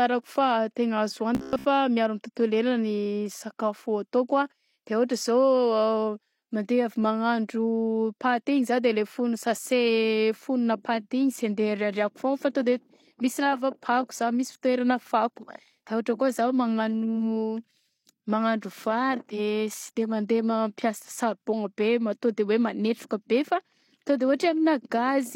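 Speech, with robotic sound from repeated short buffers from 1.35 to 1.65 s, right after "fa tegna azo". For that 0.3 s the speech collapses into a rigid, metallic buzz at about 66.7 Hz that only loosely tracks the words, and most of that stretch is repeated material rather than new audio. The likely cause is audio arriving too slowly, with playback looping the last chunk to fill the gap; the buzz frequency fits a repeated buffer of about 15 ms.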